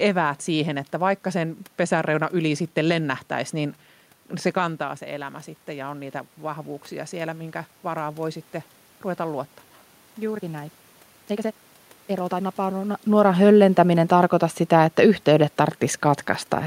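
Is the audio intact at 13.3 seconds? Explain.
Yes, the audio is intact at 13.3 seconds, with no system fault at that point.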